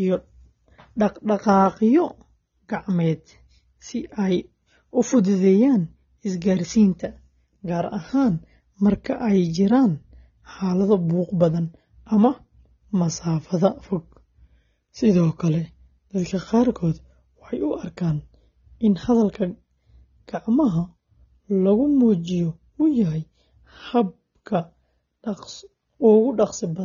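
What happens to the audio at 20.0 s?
At 20.0 s the speech is dull and smeared, as it is for the whole clip. Nothing is heard above 6.9 kHz. Sibilants and held sounds take on a warbling, fizzy texture. The likely cause is AAC compression, with AAC-LC at a low bitrate, which fits about 24 kbps. Short of bits, the encoder drops the top band and quantises the rest coarsely against its hearing model. That leaves gaps that blur detail frame by frame.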